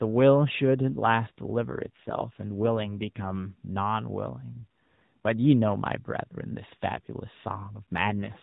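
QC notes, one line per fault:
1.60–3.36 s and 8.02–8.42 s, AMR rate drop: speech turns rougher and more synthetic with no gap or band change, which fits the mobile codec stepping down from 12.2 to 5.9 kbps.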